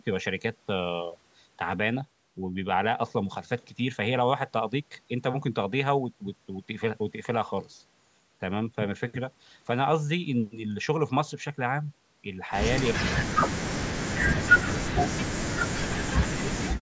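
A speech clip in which the talker's level collapses from 12.91 to 14.72 s, from 15.25 to 16.15 s, and again from 16.36 s to the end. The dips reach roughly 40 dB. This is speech suppressed in double talk, likely from an echo canceller that mistook the talker for loudspeaker echo and ducked everything. On a waveform the envelope pinches to near-flat in those spans. A spectrogram shows the harmonics fading out below the normal 8 kHz call ceiling.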